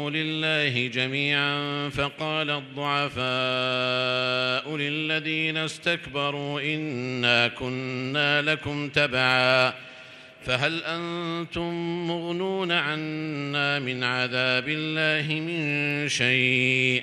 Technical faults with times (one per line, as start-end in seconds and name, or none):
none